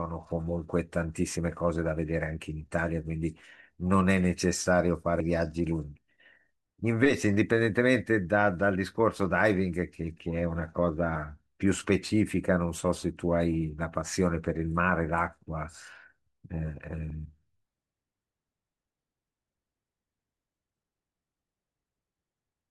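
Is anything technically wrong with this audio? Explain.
Yes. At 5.20 s and 17.10 s the speech skips abruptly, with roughly 50 ms gone at each point and the two sides butted together without a gap. This is likely audio missing between chunks, where material is lost at the handover between processing blocks of about 6 s.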